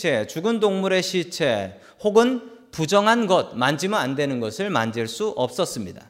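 Nothing goes wrong anywhere in this bit of speech, so there's no technical fault to point to.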